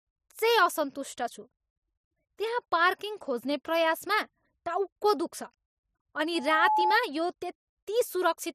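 At 6.35 s loudspeaker feedback squeal appears: an 859 Hz tone swells over roughly a third of a second to about 5 dB above the speech, then stops at 7.00 s. A spectrogram shows one bright horizontal line.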